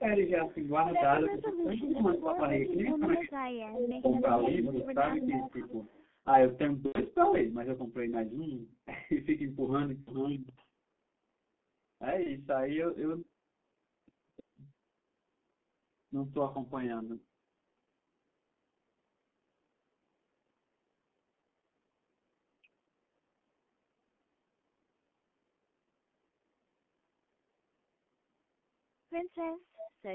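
Throughout the 30 seconds of speech, G.723.1 codec damage is heavy. The sound points to a low rate of around 6 kbit/s, coded in 30 ms frames. Everything sits between 200 Hz and 3.4 kHz, so the voice is muffled and hoarse and the consonants smear. A spectrogram shows a hard ceiling at 3.4 kHz with empty space above it, and blocky, coarsely updated formant bands below.

An echo leak appears from 0.09 to 0.54 s, 1.41 to 2.96 s, 3.54 to 6.03 s, and briefly at 29.79 to 29.89 s. A copy of the voice returns 285 ms late, most likely because a far-end loudspeaker's echo canceller let part of it through. It starts faint, about 20 dB down, rises to about 15 dB down, and by the third stretch is only about 5 dB below the speech. On a spectrogram it shows as a faded duplicate of each syllable shifted 285 ms to the right.

Speech suppressed in double talk overlaps this between 1.27 and 4.26 s. With both ends active, the canceller likely mistook the talker for echo and turned everything down. 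The voice dips by as much as about 20 dB, for around one and a half seconds in total. The waveform shows the envelope repeatedly dipping, and the spectrogram shows energy thinning in matching vertical gaps.

VoIP packet loss concealed by the speech codec occurs at 6.86 to 6.98 s, 10.01 to 10.12 s and 12.23 to 12.36 s. About 90 ms, 60 ms and 30 ms of audio went missing, which fits three, two and one lost 30 ms frames. Each time the decoder repeats its last pitch and filter, and the gap fills with a buzzy tone or coloured noise that fades. The speech then stays weak briefly after recovery. A spectrogram shows flat, repeated harmonic stripes that decay, where the waveform shrinks smoothly.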